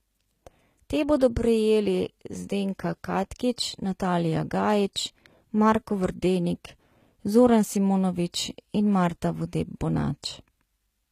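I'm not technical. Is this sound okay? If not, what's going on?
No. The speech carries plainly audible compression damage throughout, likely from HE-AAC compression. This squeezes the sound by storing only the lower tones and rebuilding the brighter top end from copies of them, so s sounds come out gritty or lisping, and nothing reaches above about 14.9 kHz.

At 1.19 s there is pre-echo, a brief hiss smeared about 19 ms ahead of a sudden sound. The compression spreads its noise across a short chunk of audio, so some of that noise spills into the quiet moment just before the attack, softening it.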